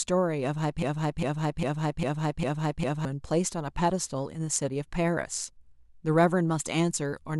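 A broken-record loop runs from 0.83 to 3.05 s: a 0.40 s fragment of speech repeats exactly, back to back, six times. The likely cause is a stalled player or stream resending its last buffer, so whatever should have played there is lost.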